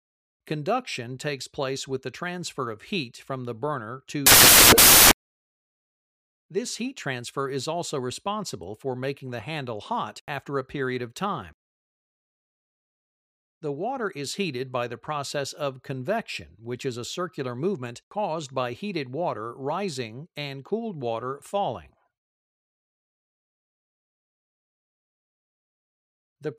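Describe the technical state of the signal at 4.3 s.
At 4.3 s the signal has samples built from the wrong bytes, from 4.26 to 6.06 s. Misassembled bytes push the low bits into each value's top, giving loud, harsh noise that is close to white on loud sounds.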